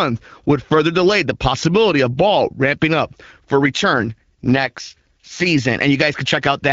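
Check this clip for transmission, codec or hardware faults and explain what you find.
There is one transmission fault, an AMR rate drop. It runs from 3.94 to 5.46 s, starting just after "ramping up for". The speech turns rougher and more synthetic, then clears. The band stays the same and there is no gap. This fits a weak link pushing the AMR-WB codec down from 12.65 to 6.6 kbit/s, which spends bits on error protection instead of speech detail.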